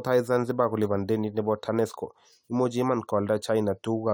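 No technical faults can be heard anywhere in this speech recording. Nothing in it calls for a timestamp or a fix.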